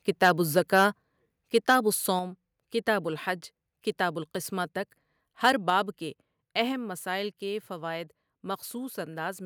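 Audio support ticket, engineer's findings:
Microphone overload at 0.22–0.31 s, 0.57–0.85 s, 1.55–1.76 s and 5.45–5.5 s (just after "الحج کتاب القسمۃ تک"). Peaks flattened, harsh crackle on loud syllables. Likely input gain set too high: peaks about 3–4 dB past the converter ceiling, tops cut off.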